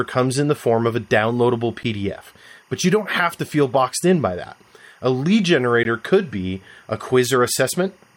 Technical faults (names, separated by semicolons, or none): timecode bleed; gap between stream segments